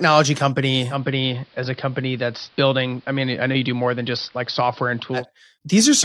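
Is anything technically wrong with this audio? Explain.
Yes. From 0.87 to 5.26 s, the speech shows digital radio blending to analogue. The receiver lost its digital stream and faded over 128 ms to the AM broadcast. Level drops about 2 dB, and faint hiss appears.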